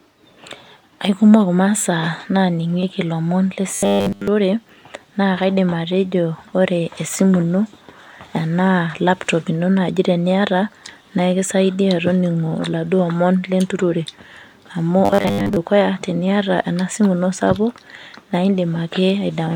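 At 3.75–4.28 s and again at 15.05–15.56 s, just before "teniata enasimu ino sapuk", the speech turns into a metallic 100 Hz buzz: robotic sound, likely from repeated 10 ms buffers.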